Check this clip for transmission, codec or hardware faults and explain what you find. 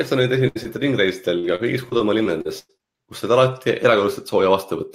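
The clip has three packet-loss faults in the speech, all in the first three seconds.

From 0.47 to 0.57 s, a burst of packet loss: about 80 ms never arrived, so the receiver extended and faded the last sound before resuming further on.

From 0.63 to 0.67 s, a short concealed packet loss: roughly 20 ms is patched by continuing the preceding sound, heard as a brief smear.

From 1.39 to 2.81 s, repeated packet loss gives a robotic sound: eight gaps, the longest 100 ms, each filled by extrapolation, covering about a fifth of the stretch and sounding choppy.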